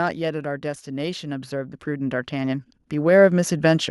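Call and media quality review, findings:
Automatic gain rising, 0.61 s to end of clip. Speech and background noise swell together, level climbing gradually by about 12 dB over roughly 3.3 s. AGC stage: input judged too quiet, gain ramped up rather than stepped, so the noise floor rises in lockstep with the talker.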